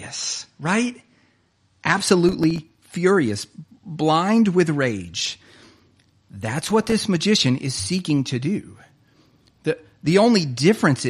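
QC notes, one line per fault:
0.0–2.0 s, adaptive stream starting at a low bitrate: nothing above 9.8 kHz and stronger codec artefacts, consistent with AAC near 32 kbit/s, then an abrupt gapless step up to fuller quality.
2.29–2.95 s and 6.61–6.92 s, processor overload crackle: rapid strings of millisecond-scale silent gaps from missed buffer deadlines produce gritty tearing; the second burst ends just before "magician is seeking to".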